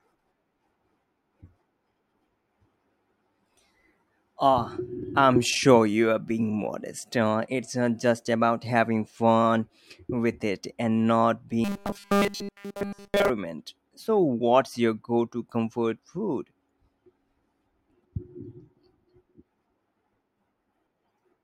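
From 11.64 to 13.30 s the speech turns into a rigid, metallic buzz fixed at 200 Hz, still loosely tracking the words: robotic sound from repeated short buffers. The likely cause is a 5 ms chunk replayed over and over while nearly all the real audio is skipped.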